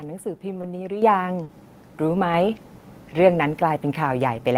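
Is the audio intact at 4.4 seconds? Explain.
Yes, the audio is intact at 4.4 seconds, with no fault at that moment.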